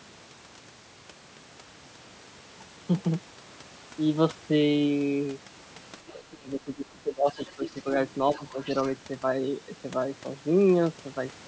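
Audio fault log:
6.13–7.86 s and 8.35–8.58 s, speech suppressed in double talk: the talker's level sinks and breaks up while a second voice is present. The first stretch is worst, with dips of about 20 dB spread over roughly one and a half seconds. The second is a brief sag of about 5 dB. The likely cause is an echo canceller that could not tell the talker from loudspeaker echo and turned both down. On the waveform the envelope collapses in pieces. On a spectrogram the harmonics fade, and the upper band, which stops at 8 kHz, thins.
7.37–7.81 s and 8.36–8.83 s, other side's voice leaking through: a fainter, separate voice sits under the talker. It is about 15 dB below the speech in the first stretch and about 25 dB below in the second. It is likely far-end audio from the device's loudspeaker that the echo canceller failed to remove fully from the microphone. A spectrogram shows a second, weaker set of harmonic traces that do not follow the talker's pitch. 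The waveform shows low-level energy overlapping the suppressed regions.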